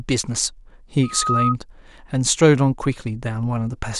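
Speech, with a loudspeaker feedback squeal from 1.03 s to 1.56 s. A single tone at 1.3 kHz rises out of the sound over roughly a third of a second and peaks at about 5 dB above the speech before it stops. The microphone is picking up the loudspeaker it drives, and at 1.3 kHz the loop gain around that path exceeds unity. That one frequency therefore keeps reinforcing itself until the loop is broken.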